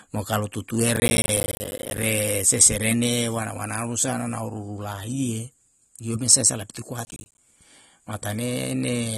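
Throughout the speech the top end stops dead at about 12.4 kHz, and what remains sounds dull and smeared, with a watery, fizzy edge on sibilants. This is most likely AAC compression at a low rate, around 32 kbps. A simple low-pass filter would cut the highs cleanly. Here the texture also swims and warbles inside the band, which points to a perceptual codec starving its spectrum rather than to plain band-limiting.

From 0.96 to 2.03 s, between "mo kalu" and "seserene wana wanao rusa", a dense gritty tearing rides on the speech. It returns more briefly from 7.05 to 7.38 s, right after "lio mesa sae lapitu". Both are processor overload crackle. Roughly 40 and then 15 short buffers, each around 10 ms, missed their deadlines in a row, and each miss left a hard-edged gap of silence. The rapid chop that begins and ends with the load sets it apart from clipping, which follows loud peaks, and from a single dropout.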